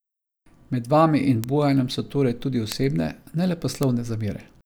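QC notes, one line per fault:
1.44 s, 2.72 s (just after "so torej tudi") and 3.83 s: bit error spike. A single flipped bit throws one or two samples to about -4 dBFS before they snap back, giving a sharp broadband tick. Unlike a dropout or edit click, the sound around it continues unbroken.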